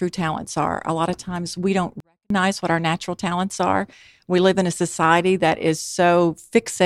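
At 2.00 s the speech drops about 48 dB for 0.3 s, a 24-bit alignment error (too quiet): 24-bit samples read as 32-bit words. The waveform shrinks to a near-flat line.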